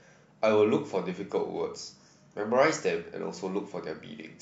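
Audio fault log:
No audible faults detected.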